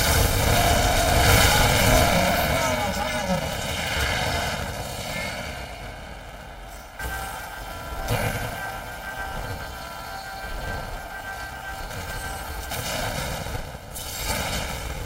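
From start to finish the sound carries a robotic buzz at 375 Hz, with no clear octave shift. That is the mark of planar audio read as interleaved. Each short block, about 2.67 ms long and consistent with 128-sample blocks, stores all its left samples and then all its right ones, but is being read as alternating left-right pairs. Each block is played twice at double speed, left then right, so the pace holds while the block boundaries chop the sound into a steady buzz.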